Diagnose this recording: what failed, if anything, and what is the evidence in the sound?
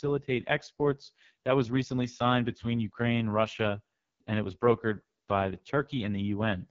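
The codec stage failed. Heavy AMR wideband (HD Voice) codec damage leaves the speech rough and raspy throughout, which fits the lowest 6.6 kbit/s mode. A spectrogram shows nothing above 7.3 kHz, with noise-filled texture replacing detail above 6.4 kHz.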